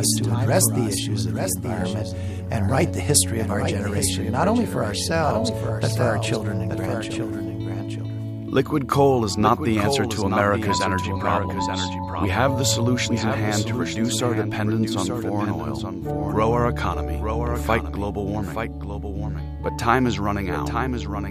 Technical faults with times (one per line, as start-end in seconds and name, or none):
0.00-21.30 doubled audio track